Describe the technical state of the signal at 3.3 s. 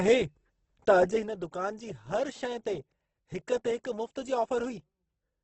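At 3.3 s the speech carries heavy low-bitrate codec damage, present throughout: a grainy, rough texture with nothing above 8.2 kHz, likely Opus compression at around 12 kbps. Missing detail is filled with noise, so the sound turns coarse rather than swirling the way MP3 does.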